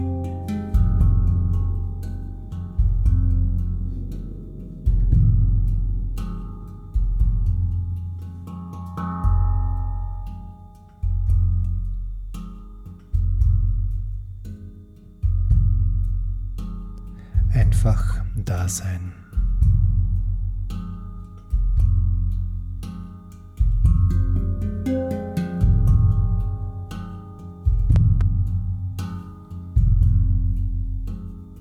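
A sudden voltage step, likely from a plug, switch or static discharge, enters the signal path between 27.96 and 28.23 s. It produces a loud pop, heard as two sharp thumps in quick succession, peaking a few decibels above the sound, which continues underneath.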